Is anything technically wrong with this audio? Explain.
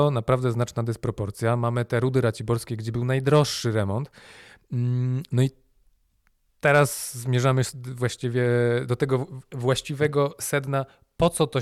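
Yes. At 2.61 s in this speech clip, between "te rudy" and "gdzie był najdroższy remont", there is a corrupt frame decoded. Flipped bits in a couple of compressed frames led the decoder to apply wrong gains or misread codes, scattering energy to frequencies the signal never held. It is heard as a brief chirp or blip peaking around -25 dBFS. A spectrogram shows a thin vertical smear of misplaced energy, and the waveform shows a brief irregular spike.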